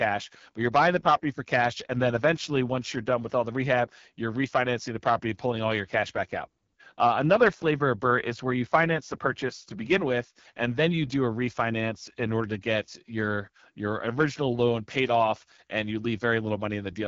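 The speech here has been carried through the AMR wideband (HD Voice) codec for its whole length, and the plainly audible damage points to one of its two lowest modes, consistent with about 8.85 kbit/s. At that rate the pulse-driven vocal tract model gets too few bits, so voiced sounds turn rough and raspy. Above about 6.4 kHz the band is only shaped noise, and nothing at all remains above about 7.4 kHz.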